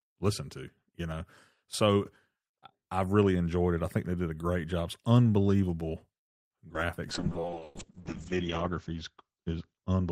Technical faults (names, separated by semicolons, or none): repeated packet loss (robotic sound); call bitrate drop; jitter buffer slow-down